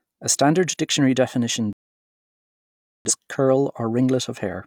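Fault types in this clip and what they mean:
Digital broadcast dropout: the speech cuts to silence at 1.73 s and resumes at 3.11 s, a hole of about 1.3 s. The receiver lost the signal or rejected corrupted frames and muted until good frames returned, so everything sent meanwhile is gone.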